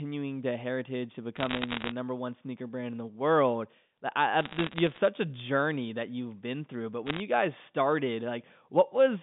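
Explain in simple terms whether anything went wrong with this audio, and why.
Something did go wrong: bit errors on a digital phone line. Three times, a burst of crackle and sharp ticks sits over the speech: from 1.36 to 1.92 s, after "the heritage to" and before "number one sneaker brand"; from 4.41 to 4.98 s, ending just before "a journey that you've"; and briefly from 7.07 to 7.20 s, between "you've been through but" and "you guys started". During each burst, scattered bits in the digital phone signal were flipped, with roughly one bit in a hundred corrupted in the first burst and about seven in a thousand in the other two. Each flipped bit spoils a single sample, and a wrong sign or high-order bit turns that sample into an abrupt click, while the speech underneath remains intact.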